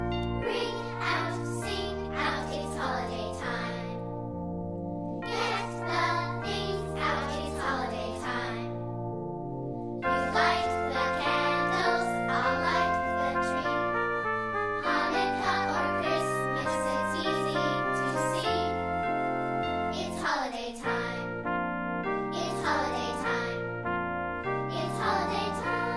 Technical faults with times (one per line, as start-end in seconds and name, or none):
none